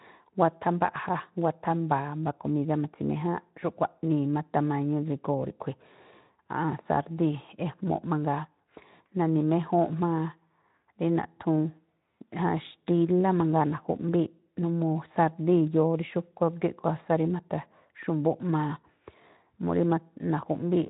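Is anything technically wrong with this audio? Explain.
No, nothing is technically wrong with this audio.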